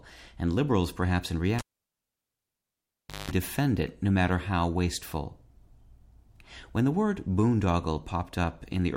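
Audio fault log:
1.59–3.31 s, cable pulled and plugged in: after "and liberals perhaps in" a pop, about 1.7 s of near silence, then roughly 0.2 s of 50 Hz mains buzz as the tip reconnects. Another pop, and "defend it no matter" resumes.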